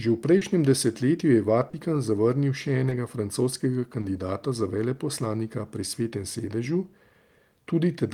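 Short concealed packet loss strikes at 0.37–0.43 s, at 1.69–1.75 s before "zavrnil še", at 2.89–2.93 s after "zavrnil še" and at 4.01–4.05 s before "za veleposlanika pri". Missing stretches of 40, 40, 20 and 20 ms were patched by extending the preceding speech, giving brief smears rather than the silent holes of an uncovered dropout.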